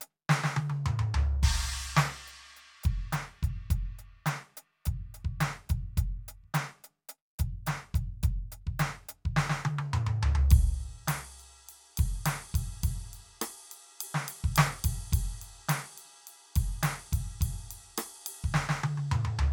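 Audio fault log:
No audible faults in the music, nothing to log.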